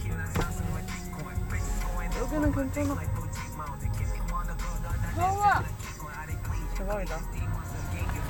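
From start to finish there's USB whine sitting under the sound: a steady, fixed-pitch tone at 8 kHz, with its strongest component up at the 16 kHz harmonic. That 8 kHz spacing points to the bus's 125-microsecond microframes. Each burst of current draw leaks into the audio through shared power or ground. It sits roughly 25 dB below the wanted sound, so it comes across as a thin, high, needling whistle that never moves.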